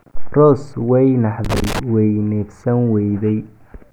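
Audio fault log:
1.45 to 1.79 s, loose connector crackle: for about a third of a second the speech is broken by an irregular burst of scratchy crackle as a worn or dirty contact repeatedly makes and breaks, chopping the signal on and off and adding pops from any DC on the line. Unlike evenly spaced digital clicks or steady vinyl surface noise, the bursts here are uneven and ragged, confined to this one stretch as if something moved.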